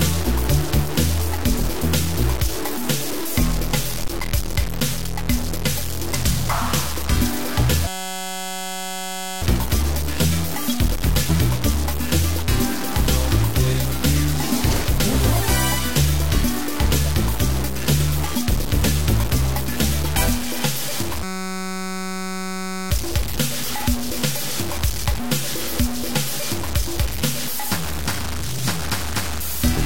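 Throughout the clip a coarse, grainy distortion rides on the audio and changes with it, sitting only slightly below the signal; quiet passages turn gritty or sputter. This is likely low bit depth without dither, with truncation to roughly 4 bits. The error tracks the signal rather than forming a steady hiss, which separates it from ordinary background noise.

At 4.04 s a deep phantom power thump lasts until 4.17 s, dying away within about 28 ms. A supply switching on a live input sends a voltage step through the coupling capacitors. It is a single low-frequency blow, not a repeating pattern, which sets it apart from a click or dropout.

From 7.87 to 9.42 s, and again from 21.23 to 22.91 s, a system hang loop interrupts the audio with a steady buzz. The machine froze while the hardware kept replaying one 5.33 ms block, which fits a 256-sample buffer, at a rate of 188 Hz. A fixed, pitched drone distinguishes it from stutter or packet loss.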